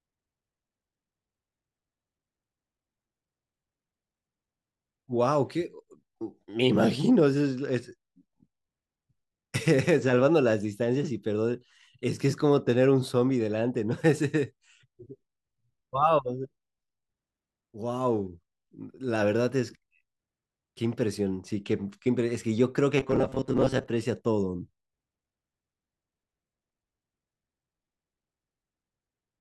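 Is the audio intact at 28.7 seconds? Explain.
Yes, at 28.7 seconds the speech is intact, with no dropout, distortion or other fault at that moment.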